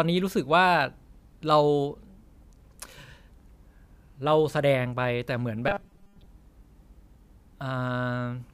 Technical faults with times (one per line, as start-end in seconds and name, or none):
5.68-6.28 robotic sound from repeated short buffers